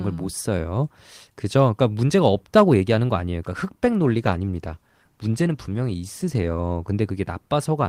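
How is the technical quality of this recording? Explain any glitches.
One glitch stands out: a call bitrate drop from 3.84 to 6.99 s. The encoder lost bits, which fits a fall from 32 to 17 kbps. The speech is coded more coarsely for about 3.1 s, so it turns rough, watery or muffled before recovering.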